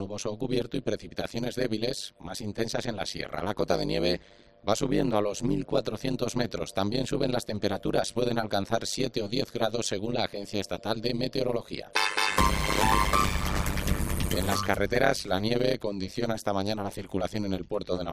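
A harsh, buzzing tremolo runs throughout, pulsing around 100 times a second: overlap-add ripple, where mismatched windowed frames swing the level by about 60 dB each frame.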